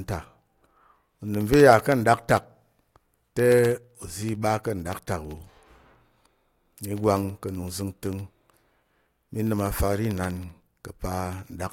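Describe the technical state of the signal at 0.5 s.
At 0.5 s the speech sits inside a run of periodic USB or driver dropouts lasting from 0.07 s to 11.65 s. Something stalls the USB bus or audio driver every 64 ms, and each stall replaces a tiny slice of signal, roughly a tenth of a millisecond, with silence. Roughly two hundred gaps result, heard as a steady ticking at about 16 per second that is audible only while speech is present.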